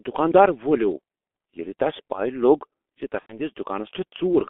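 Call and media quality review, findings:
G.723.1 codec, throughout: muffled, hoarse speech with smeared consonants, band limited to roughly 250 Hz to 3.5 kHz. Heavy damage consistent with the 6.3 kbit/s mode; coarse 30 ms frames and a slowly updated voice model lose detail and transients.

VoIP packet loss concealed by the speech codec, 3.20 to 3.39 s: speech stretches into a buzzy tone or coloured noise that fades. About 90 ms missing, which fits three lost 30 ms frames. The decoder extrapolates from its last pitch and filter with decaying gain, and recovery lags after packets resume.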